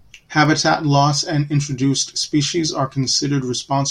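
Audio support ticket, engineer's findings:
Single sharp click at 0.45 s, likely dropped samples: a tiny fraction of a millisecond missing, so the waveform jumps ahead. Probably the stream or buffer handoff.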